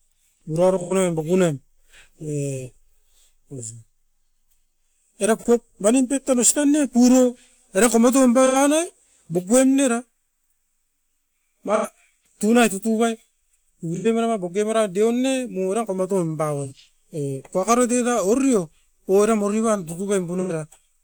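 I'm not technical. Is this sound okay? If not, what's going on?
No. AAC frame loss with concealment occurs at 0.82, 5.38 (just before "pep mani"), 8.46, 11.74, 13.96, 16.65 and 20.40 s. Chunks of compressed speech went missing, about 85 or 43 ms each, and the player patched the gaps with guessed sound, leaving brief smeared, noisy blips.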